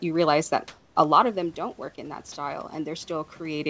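Comfort noise in place of the background runs from 0.68 to 0.96 s, between "you realize that" and "a lot of them". For about 280 ms the real room background, sitting about 36 dB below the loudest parts, gives way to a flat, featureless hiss about 6 dB different in level. This is likely discontinuous transmission, with the receiver synthesising noise during the pause.

Automatic gain rising begins at 1.55 s, just after "a lot of them", and continues to the end. The input fell by about 11 dB, so the gain control slowly lifted its gain, and speech and background swell together over the following seconds.

Sound dropped by the voice detector occurs at 2.32 to 2.36 s. About 30 ms of speech vanishes into a 40 ms patch of steady noise, likely because the sender's detector mistook the sound for background and stopped sending until it retriggered.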